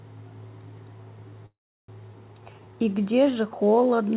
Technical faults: call audio freeze; skip ahead; jitter buffer slow-down

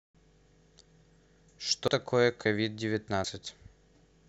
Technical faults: dropped buffer (overrun)

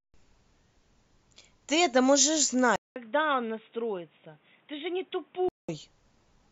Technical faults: input switched to a poorer device

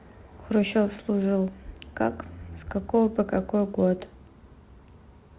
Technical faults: none

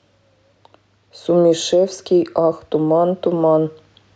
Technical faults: gain pumping

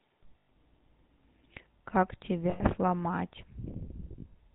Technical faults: GSM full-rate codec; lost GSM frames

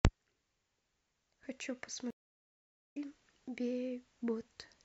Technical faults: stream reconnect

